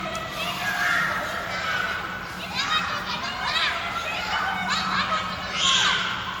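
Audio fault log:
throughout, generation loss. The sound is swirly, smeared and hollow, and transients have lost their edge. Nothing is present above 19.9 kHz. The likely cause is repeated lossy coding, around ten passes through an MP3 encoder at a rate that fits 96 kbit/s. Each pass re-quantises on a shifted frame grid. Fresh noise and spectral holes pile up, so the damage is worse than one encode at that rate would leave.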